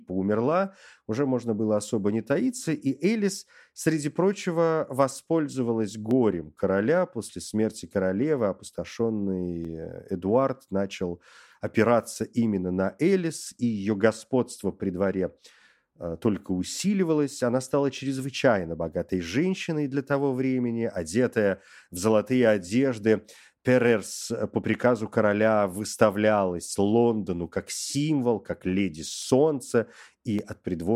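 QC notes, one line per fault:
6.11 s (after "среди прочего воспользовалась"), 9.65 s, 29.22 s (after "как символ как леди"), 30.39 s: dropped samples. Each is one sharp click, likely from just under a millisecond of missing audio that makes the waveform jump.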